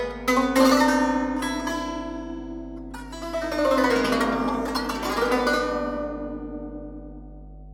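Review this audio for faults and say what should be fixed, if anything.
Mains hum runs under the whole track, a steady 50 Hz drone about 15 dB below the music, from power-line noise leaking in through a ground loop or a nearby transformer. Fix the grounding, using balanced cables or an isolator, and route audio lines away from transformers.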